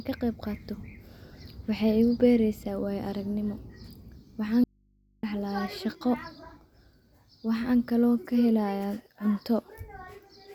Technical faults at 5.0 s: audio dropout to a faint residue

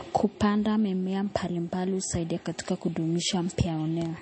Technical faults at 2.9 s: MP3 compression

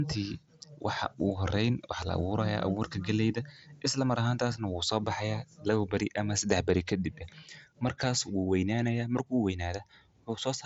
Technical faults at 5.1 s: none

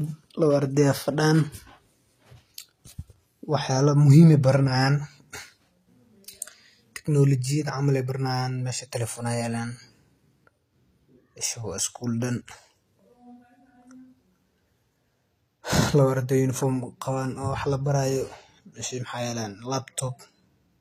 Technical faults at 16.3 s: HE-AAC compression

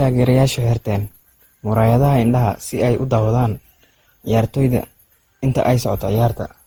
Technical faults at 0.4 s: generation loss

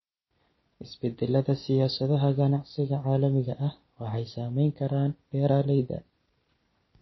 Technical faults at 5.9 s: MP3 compression

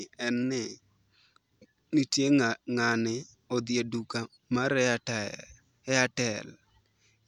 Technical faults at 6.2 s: none

